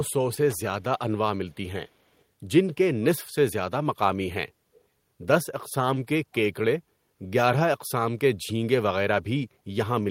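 Short concealed packet loss at 0.34 to 0.38 s: about 30 ms of the speech arrived too late to be decoded, and the receiver covered roughly 23 ms of that gap by extending the preceding sound, keeping its pitch where it was voiced and using shaped noise where it was not, before fading back into the real signal. The result is a brief smeared wobble.

Loose connector crackle at 0.50 to 0.58 s: a worn or dirty contact in the audio path is rapidly making and breaking as it shifts, so the signal is chopped into fragments. It is heard as an irregular burst of scratchy crackle lasting under a tenth of a second.

Echo leak at 1.51 to 1.56 s, 1.88 to 2.21 s and 4.73 to 4.81 s: a faint delayed copy of the speech returns about 209 ms behind the original, sitting very far below it, a little stronger in the last instance. The likely cause is a far end playing the call over a loudspeaker whose echo canceller left some of the pickup in its send path, so a delayed copy of the same speech trails behind it.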